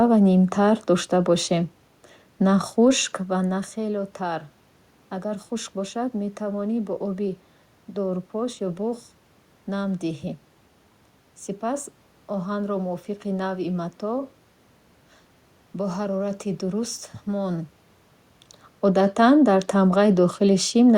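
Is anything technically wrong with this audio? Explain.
No, nothing technically wrong.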